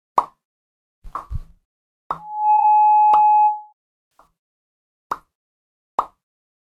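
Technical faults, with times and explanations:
1.13–1.15 s, 2.56–2.63 s and 4.14–4.23 s: corrupt frame concealed. The decoder caught damaged AAC data and papered over it. The first fits a single frame, and the other two span about three frames each.
2.18–3.73 s: loudspeaker feedback squeal. A mic was hearing its own speaker, and the loop gain went over one at 846 Hz. That tone swells up over roughly a third of a second and sits about 10 dB above the sound before it drops away.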